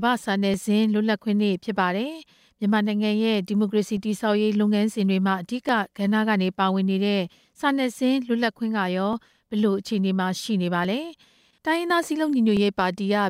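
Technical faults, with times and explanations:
0.54–12.57 s, clock drift buffer slips: a click pops up every 1.72 s through the speech, about seven of them in all. Each is where a short block of samples, something like 30, gets dropped or repeated, leaving a tiny discontinuity in the waveform. That steady spacing is the giveaway. It's likely two devices running on separate clocks, off by a few hundred ppm, so the buffer between them slowly drifts until it has to slip.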